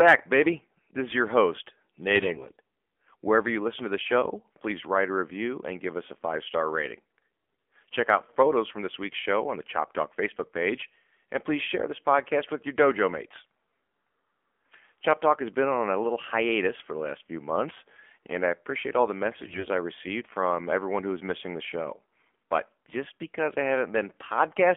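The whole clip of speech has passed through the AMR narrowband mobile codec, band-limited to roughly 200 Hz to 3.4 kHz, with a plainly buzzy, synthetic edge that fits a low 7.4 kbps mode. AMR bit errors hit at 2.15 to 2.56 s, 7.38 to 7.68 s and 19.32 to 19.68 s: corrupted, weakly protected frame bits misplace the excitation pulses, so the voice holds pitch and level but turns hoarse and gargly, worst in the middle burst.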